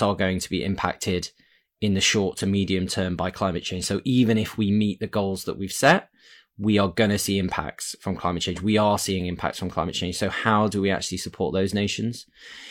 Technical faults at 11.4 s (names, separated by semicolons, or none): none